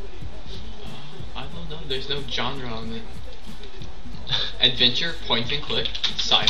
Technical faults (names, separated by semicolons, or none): none